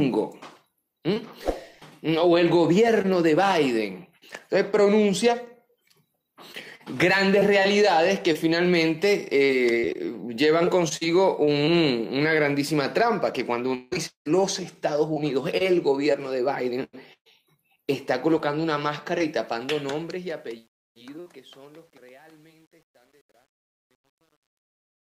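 From 19.28 s to the end, the fade-out that begins around 19.28 s shows truncation distortion on a fade. The gain stage drops low bits without dither, consistent with roughly 9-bit resolution, so from 20.67 s the tail turns gritty.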